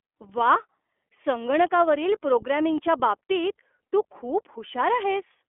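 From start to finish the speech sounds thin, boxed-in and slightly rough, with a synthetic graininess that is plainly audible: nothing survives above about 3.7 kHz, and the lows below about 300 Hz are gone too. This is the iLBC codec at work. It is a narrowband VoIP coder that rebuilds each short frame independently, here in steps that fit its 20 ms mode at around 15.2 kbps, trading naturalness for robustness.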